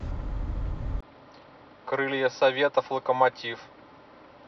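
At 1.01 s the speech drops out for 20 ms. Afterwards nothing above 5.8 kHz survives, so it sounds duller and boxier. It is roughly 5 dB quieter, over a faint new background noise. The input likely switched to a poorer device, through the end.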